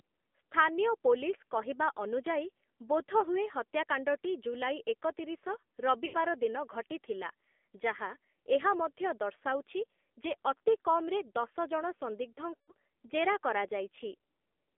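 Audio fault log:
Throughout: AMR narrowband mobile codec. The sound is squeezed into a phone band of about 250 Hz to 3.5 kHz, and the buzzy, synthetic edge on the speech points to AMR-NB at a low rate, around 7.4 kbps, with only a few pulses to model each stretch.
3.20 to 3.24 s, 6.06 to 6.17 s, 12.56 to 12.72 s: lost AMR speech frames. The first is a quick dip that fits a single dropped frame. The later two smear and fade out as the decoder keeps repeating its last pitch and vocal tract settings at falling gain, which fits runs of about four and six frames.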